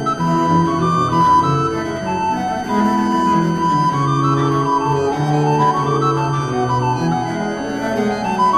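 Switching supply whistle runs through the whole clip, from start to finish. A switching power supply is either cycling in an audible burst mode or beating against another supply, and its output leaks into the audio path as a high, narrow tone near 1.5 kHz. Its pitch stays within a tight band of about 1.51 to 1.57 kHz, and it sits roughly 20 dB below the wanted sound, as a persistent whistle beneath it.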